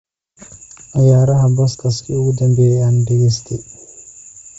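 From start to finish, the speech carries a breathy, grainy edge. Nothing is heard above about 7.8 kHz, so the top of the band is simply gone. The damage is heavy. The likely cause is Bluetooth LC3 compression. Starved of bits, the codec discards much of the upper spectrum and fills the gaps with noise. The coarse texture fits a low rate near 24 kbps with short 7.5 ms frames.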